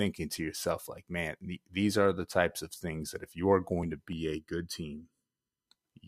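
From 4.13 to 5.68 s, one channel runs late against the other by about 0.7 ms, and when the two are summed to mono the shared speech energy cancels at evenly spaced frequencies. This channel delay (comb filtering) puts the first notch somewhere near 700 Hz, with further notches repeating up the spectrum. For that stretch the speech turns hollow and phasey, as if heard through a tube.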